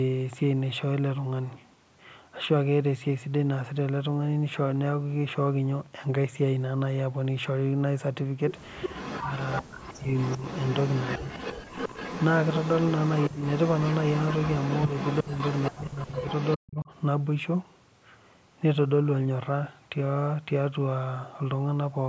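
From 8.82 to 15.71 s an echo leak runs under the speech: a second copy of the talker trails the original by 380 ms, roughly 10 dB quieter, likely because a loudspeaker's sound got past the far end's echo canceller. On a spectrogram the harmonic stripes and syllable onsets repeat as fainter ghosts shifted 380 ms to the right. In the waveform, gaps between phrases fill with low-level echoed bursts instead of falling to the noise floor.

Inside that stretch, speech suppressed in double talk begins at 9.2 s and lasts to 10.46 s. For about 0.7 s of that span the talker's level drops by as much as roughly 40 dB, likely because the echo canceller mistook the overlapping voices for echo and attenuated both. The voice sounds swallowed and choppy. The waveform envelope shows abrupt notches cut into ongoing speech, and the spectrogram shows the upper harmonics thinning or vanishing in blocks.

A shorter dip of the same kind follows at 11.19 to 11.32 s, roughly 25 dB deep.

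At 11.6 to 11.7 s the background is gated by the echo canceller: the room sound falls by about 40 dB for 100 ms and then returns. It is heard as a brief hole of near-silence. In the waveform the noise floor collapses to almost nothing, and on the spectrogram the broadband background haze is blanked out as a narrow vertical gap.

Speech suppressed in double talk recurs at 13.28 to 13.42 s, again roughly 25 dB deep, and at 15.22 to 15.37 s, about 20 dB deep. Each of these short dips lasts around 150 ms and is heard as a brief cut in the voice. The longest suppression runs from 15.71 to 16.91 s, with about 1 s affected and drops near 40 dB. As before, the likely cause is the canceller treating overlapping speech as echo.

During that stretch the echo leak reappears from 16.02 to 16.56 s, again delayed 380 ms but weaker, roughly 15 dB below the speech. On the spectrogram it shows as faint repeated syllable traces.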